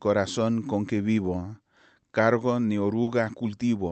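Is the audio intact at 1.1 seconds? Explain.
Yes, the audio is intact at 1.1 s, with no dropout, glitch or distortion there beyond the ordinary character of the Opus call path it passed through.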